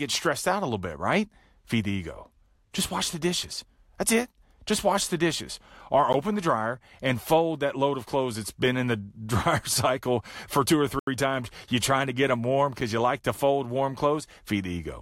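At 6.13 s and again from 10.99 to 11.07 s, a block of digital silence cuts out the speech for about 13 ms, then 80 ms, likely from a missed buffer fill. The first sounds as a tick, the second as a short hole. Waveform and spectrogram show flat, empty gaps with sharp edges.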